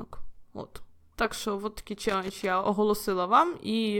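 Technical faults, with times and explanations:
1.95–2.45 s, loose connector crackle: an irregular half-second burst of scratchy crackling, as a worn or dirty contact rapidly makes and breaks, chopping the speech signal.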